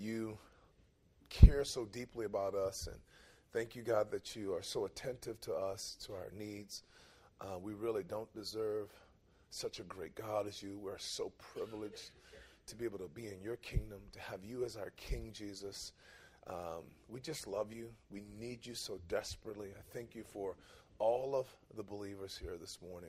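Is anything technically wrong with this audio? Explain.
No, nothing technically wrong can be heard in this audio. There are no faults to describe.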